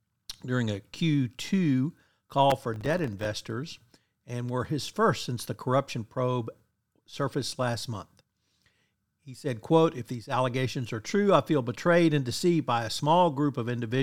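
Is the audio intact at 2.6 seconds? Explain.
No, processor overload crackle runs from 2.50 to 3.25 s. Repeated missed deadlines on tiny buffers, each under a couple of milliseconds, leave many brief silent gaps. Together they sound like gritty tearing over the speech, not one clean dropout.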